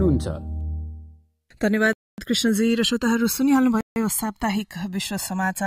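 From the first moment to the last, the two channels are drifting apart. Each side runs on its own clock, the two differing by a couple of hundred parts per million, so the gap between them widens to roughly a millisecond and a half by the end. Folded to mono, that growing offset drags comb notches slowly through the spectrum, heard as a slow, ever-moving flange. A fixed inter-channel delay would instead leave a static, hollow colouration that never travels.

At 1.93 s the sound cuts to dead silence for about 0.25 s, resuming at 2.18 s. A second, shorter gap of about 0.15 s follows at 3.81 s, with the sound returning at 3.96 s. Both fit a Bluetooth stall, likely from interference delaying packets until the headphone buffer emptied. The silence is clean and total, and the sound picks up again without fading in, which separates it from a noise gate closing or a level dip.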